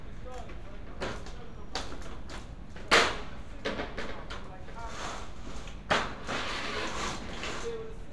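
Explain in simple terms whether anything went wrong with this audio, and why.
Nothing went wrong with the recording: the audio signal stays steady and intact throughout, with no technical problems anywhere in it.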